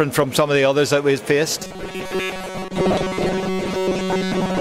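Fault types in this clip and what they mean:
Robotic sound from repeated short buffers: From 1.6 s on, the sound turns into a rigid, metallic 188 Hz buzz. A chunk of about 5 ms is likely repeating, filling most of the time.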